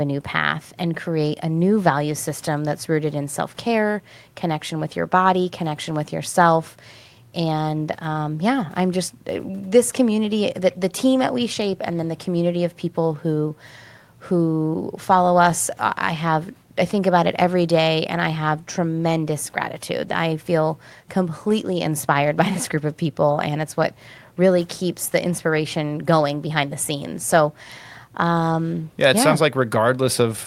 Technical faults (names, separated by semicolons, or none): none